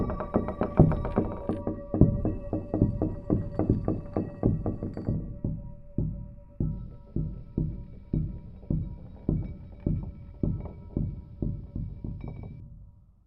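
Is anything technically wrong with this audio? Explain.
No, nothing technically wrong can be heard in this recording. The sound comes through steadily with no audible defects at any point.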